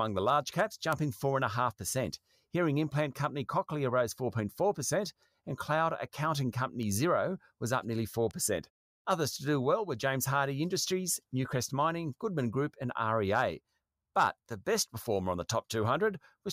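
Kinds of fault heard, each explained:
Bit error spike: sharp ticks at 0.93, 6.83 and 8.31 s, each a flipped bit throwing one to three samples off by a power of two.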